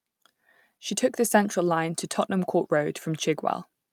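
Speech recording; no technical faults detected anywhere in the clip.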